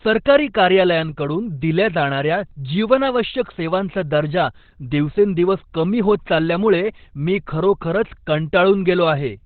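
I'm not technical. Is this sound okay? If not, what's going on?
No. From start to finish the speech sounds muffled and hoarse, with nothing above 4.4 kHz, likely from heavy Opus compression running in its narrowband speech mode.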